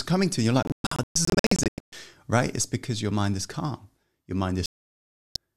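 Speech with two digital broadcast dropouts. From 0.63 to 1.93 s the receiver mutes in scattered short holes, the longest 120 ms, and it mutes again from 4.66 to 5.36 s. Unlike concealed packet loss, these gaps are true silence, and the missing sound never comes back.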